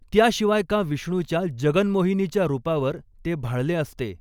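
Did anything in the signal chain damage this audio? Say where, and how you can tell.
No, nothing in the chain audibly damaged this speech; no stage shows any sign of a fault.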